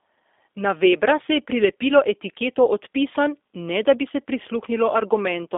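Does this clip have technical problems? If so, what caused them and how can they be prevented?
Yes. G.729 codec damage runs throughout: speech rebuilt from a filter, pitch predictor and sparse pulses sounds rough and synthetic, with nothing above 3.6 kHz, which fits an 8 kbit/s G.729 stream. Prevent it by using a wideband codec such as G.722 or Opus.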